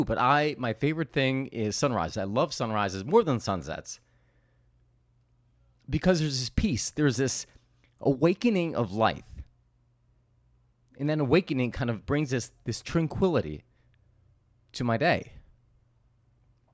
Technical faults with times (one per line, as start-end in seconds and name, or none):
none